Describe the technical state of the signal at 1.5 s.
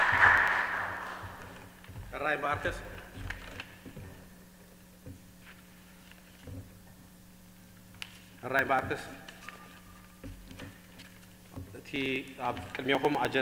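At 1.5 s you're in the middle of periodic USB or driver dropouts running from 0.08 to 13.35 s. Every 0.099 s something stalls the audio path and around a millisecond is skipped outright, so you hear a steady ticking whenever there's signal.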